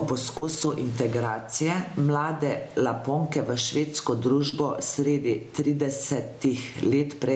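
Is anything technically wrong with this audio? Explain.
Yes, there are three kinds of trouble in this speech.

Gain pumping runs through the whole clip. The gain swings by around 15 dB, most likely because the input gain is set too high and a fast limiter keeps clamping it. Loud and soft parts end up squashed together.

Short concealed packet loss happens twice. The first is at 0.37 to 0.43 s, just before "integracije mlade", and the second is at 4.49 to 4.54 s, right after "v švedsko". Each time about 40 ms of audio never arrived. The receiver papered over the hole by extending the previous sound before blending back, so you hear a brief smear or wobble.

A lost packet rebuilt from error correction follows each of those. From 0.41 to 0.71 s, about 160 ms of audio was played from low-bitrate backup copies carried in the following packets. That fits a run of 20 ms Opus frames. At 4.52 to 4.54 s one 20 ms frame was rebuilt the same way. 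There's no gap, but those stretches sound rougher and noisier than the audio around them.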